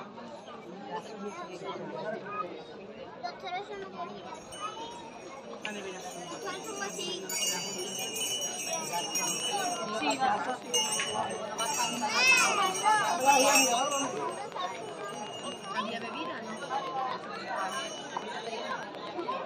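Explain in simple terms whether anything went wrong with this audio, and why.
A train of clicks runs from 8.92 s to 19.33 s: about a hundred evenly spaced ticks, roughly eight per second, sitting on top of the sound. Their steady rhythm and matching shape likely come from electrical interference or a faulty connection or power supply.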